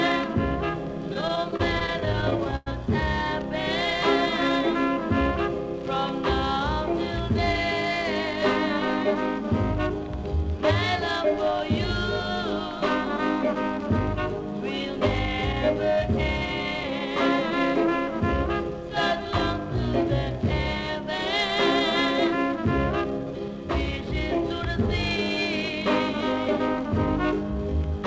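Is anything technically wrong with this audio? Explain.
Yes, there are two faults. The audio also comes through a call path whose content stops at 8 kHz, which fits a wideband codec such as G.722.

Repeated stalls (stutter) run from 1.14 to 2.68 s. Packets were arriving late or more slowly than playback consumed them, so the jitter buffer kept running dry. Each time, the receiver extended the last sound to cover the gap, fading it on the longer waits. Close to twenty short gaps occur in that span, the longest about 103 ms. They total roughly 305 ms, about a fifth of the span. Nothing is actually lost, but the sound drags and stutters.

A jitter buffer speed-up follows from 16.76 to 18.08 s. Here the buffer held more audio than its target, and the receiver shortened its delay by repeatedly cutting out pitch-period-sized slices. Around 70 ms is removed over that stretch, so playback runs at about 105% speed with the pitch unchanged. 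The result sounds slightly hurried rather than higher.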